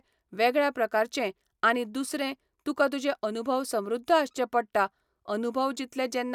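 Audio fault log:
No fault can be heard anywhere in the speech. There is nothing to log for this clip.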